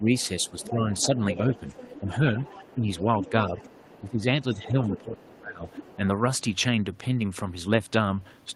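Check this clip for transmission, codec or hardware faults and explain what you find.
Two echo-cancellation faults affect the speech in this clip.

Speech suppressed in double talk happens from 0.0 to 1.15 s, briefly at 2.00 to 2.07 s, and from 2.74 to 5.64 s. The talker's level dips while a second voice is present. The drops are about 10 dB in the first two spans and about 20 dB in the longest, where well over a second is pulled down in pieces. The likely cause is an echo canceller that cannot separate the talker from loudspeaker echo, so it turns both down.

The other side's voice leaks through from 0.16 to 4.1 s and again from 4.85 to 5.97 s. A second, fainter voice sits under the talker, about 20 dB down in the first stretch and about 15 dB down in the second. This is likely a far-end voice played on the talker's loudspeaker that the echo canceller failed to remove from the microphone signal.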